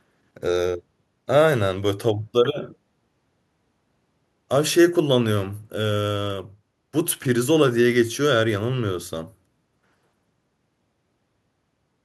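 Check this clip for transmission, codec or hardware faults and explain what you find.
Nothing turns up here in the way of transmission, codec or hardware trouble; the speech comes through steady the whole way, with no faults to point to.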